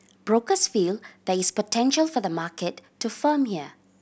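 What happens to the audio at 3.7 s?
Nothing goes wrong at 3.7 s; the speech carries on intact there, with no dropout, click or distortion.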